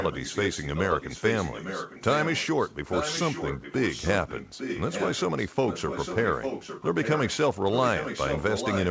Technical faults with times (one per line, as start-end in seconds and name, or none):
0.00-7.37 echo leak
7.71-8.91 echo leak